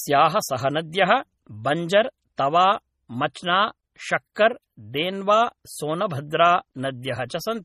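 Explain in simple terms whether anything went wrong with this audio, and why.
The speech sounds watery and swirly from start to finish, with metallic chirps on s sounds, likely from heavy MP3 compression dropping faint detail and all treble above 15.3 kHz.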